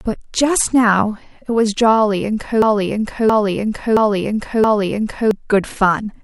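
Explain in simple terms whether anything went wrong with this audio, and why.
From 2.62 to 5.31 s the speech gets stuck and a 0.67-second piece plays four times in a row, exactly the same each time. This broken-record loop likely happened because playback stalled and kept repeating its last fragment, so the speech meant for those seconds is missing.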